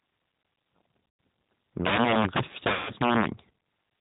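G.729 coding runs through the whole speech clip at 8 kbit/s, with plainly audible damage. The decoder rebuilds each 10 ms frame from a vocal tract filter, a pitch predictor and a handful of pulses rather than the original waveform. Nothing above 4 kHz survives, so the speech sounds muffled and narrow, with a rough, slightly synthetic edge.

VoIP packet loss concealed by the speech codec first appears from 1.07 to 1.19 s, a 120 ms gap that fits four lost 30 ms packets. With no new data, the decoder keeps repeating its last pitch period and filter shape while turning the gain down frame by frame. The gap is heard as a short, stretched buzzy tone or coloured noise that fades instead of going silent. The next frames start from that degraded state, so the speech after the gap comes back thin before it recovers.

Integer overflow affects the span from 1.85 to 3.26 s, where the signal is driven about 12 dB past the available integer range. 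Any sample sum that exceeds the maximum wraps around to the opposite extreme instead of being held at the limit. Each loud peak therefore flips across the full range, producing violent, sharp cracks on the louder syllables. These are harsher and more abrupt than the flattened distortion of ordinary clipping.

VoIP packet loss concealed by the speech codec happens again from 2.73 to 2.92 s, inside the overflow span, with about 150 ms of audio lost, which fits five 30 ms packets. The decoder again holds and repeats its last pitch and filter with falling gain, giving a stretched buzzy tone or coloured noise that dies away. Speech returns weak and distorted while the decoder rebuilds its state.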